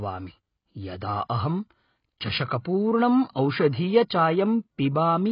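Speech with heavy low-bitrate damage throughout, likely AAC compression at around 16 kbps: it sounds dull and warbly, and a spectrogram shows nothing above 5.1 kHz. Pre-echo from 3.31 to 3.36 s puts 44 ms of hiss before an attack, visible as noise ahead of the waveform's sharp onset.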